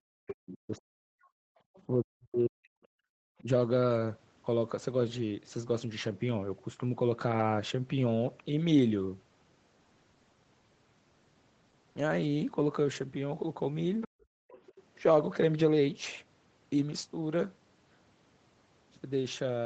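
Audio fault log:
0.01–1.17 s, 1.87–2.82 s, 3.42–3.49 s: speech suppressed in double talk. The voice sinks by as much as about 40 dB in the first two spans and about 15 dB in the brief third. This is likely the echo canceller mistaking overlapping talk for loudspeaker echo and attenuating everything.
1.23–1.82 s, 14.01–14.83 s: other side's voice leaking through. A second, fainter voice is audible, at about 30 dB below the talker at first and about 20 dB below later. This is likely loudspeaker playback that the echo canceller failed to remove fully from the microphone.
1.45–1.59 s, 3.10–3.14 s, 14.08–14.50 s: background gated by the echo canceller. The room tone abruptly falls away by about 40 dB and then returns. The canceller clamped the microphone hard while far-end sound was playing, then released it.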